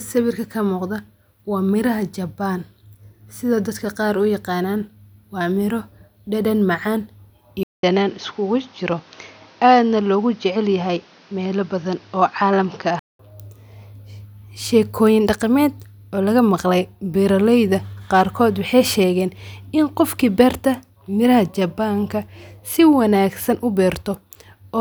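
From 7.63 s to 13.19 s the speech turns narrower and duller, pointing to an input switched to a poorer device, likely a change of microphone or a headset's call profile. A gap of 200 ms marks the switch, after which nothing above 6.6 kHz survives, so the air vanishes. The loudness barely shifts, but a new background noise sits roughly 30 dB under the speech. At 13.19 s the full band returns.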